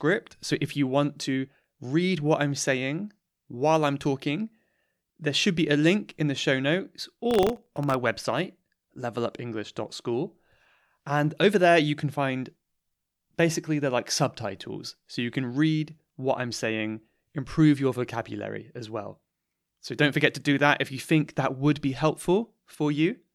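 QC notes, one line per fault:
7.31–7.94 s processor overload crackle after "in the show notes": about twenty sub-millisecond buffers replay stale audio, leaving hard-edged waveform steps and dense broadband vertical spectrogram streaks.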